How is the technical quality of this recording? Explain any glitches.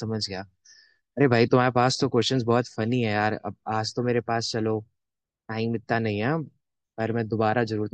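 No glitches turn up anywhere in this speech recording. Nothing in it breaks up, jumps or gets interrupted, so there's no fault to explain.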